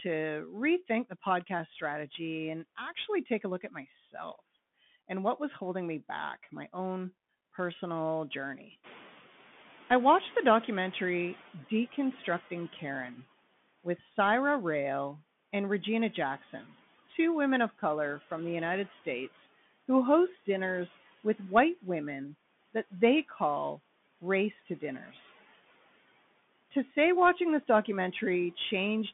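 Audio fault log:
Throughout: Bluetooth CVSD headset codec. Nothing above 3.8 kHz survives, and the line sits between about 150 Hz and 3.5 kHz, which fits a 64 kbps one-bit delta link. Its adaptive step can't track sharp sounds, so sibilants turn scratchy and a grainy hiss runs under the speech.
8.83 to 11.52 s: noise suppressor catching up. Just after "my own personal journey" the room noise jumps by about 18 dB near 9 s, and the suppressor's noise estimate lags. The noise passes through with less reduction at first, then sinks by about 9 dB over 2.69 s as the estimate adapts.
25.06 to 25.15 s: speech cut by the noise suppressor. Right after "race to", the suppressor mistakes part of the speech for background and pulls it down by about 8 dB for roughly a tenth of a second. That stretch sounds swallowed and faint.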